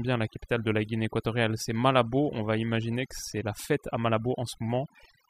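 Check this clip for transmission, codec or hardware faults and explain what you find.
One processing fault runs through the whole speech clip: overdone noise removal. A noise reduction stage was applied far too aggressively to a noisy recording. It estimates a noise floor and pushes any frequency band near that estimate down hard or shuts it off. The quieter parts of the speech fall near that floor too and get removed with the noise. The background drops and breaks up into twinkling specks.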